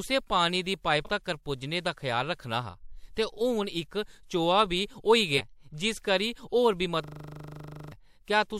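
Speech, with two kinds of fault. Compressed frames were skipped, either missing or rejected by the decoder, at 1.05 s just after "पानी दी" and again at 5.37 s. Each time the audio jumps ahead about 150 ms, which fits three frames of roughly 46 ms. In a system hang loop from 7.04 to 7.92 s, the machine froze while the sound hardware kept replaying one 40 ms buffer 22 times. This produces a steady 25 Hz buzz and loses about a second of audio.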